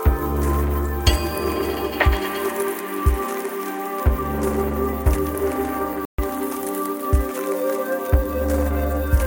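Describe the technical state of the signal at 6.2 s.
At 6.2 s the music is just resuming after a Bluetooth stall: a clean 134 ms silence from 6.05 to 6.19 s, likely a drained headphone buffer, showing as a flat-line gap in the waveform and a blank vertical strip across the spectrogram.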